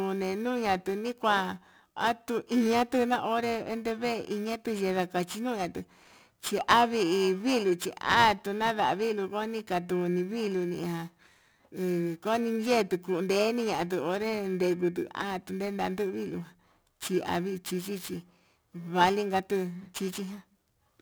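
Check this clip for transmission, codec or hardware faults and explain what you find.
Periodic clock jitter runs through the whole clip. The converter's sampling clock is being shaken at a steady rate of around 2 kHz. That timing wobble puts sidebands on every component of the speech, offset above and below by that spacing and strongest on the higher frequencies. The result is a rough, metallic edge on the speech that drops away whenever the sound pauses.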